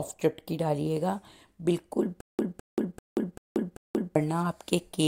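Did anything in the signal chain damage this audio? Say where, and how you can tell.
Yes, there's a stutter with silent gaps from 2.21 to 4.16 s: a 208 ms burst repeats five times, each followed by about 182 ms of dead silence, every 390 ms. That's likely a stalled playback or stream buffer replaying its last fragment on each retry, so the audio for that stretch is lost.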